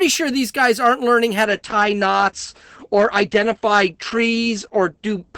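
At 1.44 s the speech steps abruptly, with no gap, to an adaptive stream at a lower bitrate and stays there, fitting a fall from about 64 to 12 kbit/s Opus. Rising codec artefacts, not a clean dulling, separate it from simple low-pass filtering.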